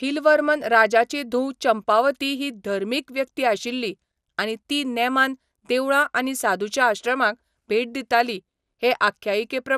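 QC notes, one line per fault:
Throughout: MP2 compression. The speech sounds dull and gurgly with grainy distortion, and nothing reaches past about 15.1 kHz. It's likely a starved MPEG Layer II encode, around 80 kbps, where top sub-bands drop out and the surviving bands get quantised coarsely.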